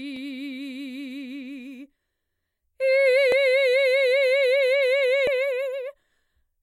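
Brief glitches interrupt this music at 0.16, 3.32 and 5.27 s, caused by damaged data in a compressed stream that makes the decoder lose sync and hunt for the next frame.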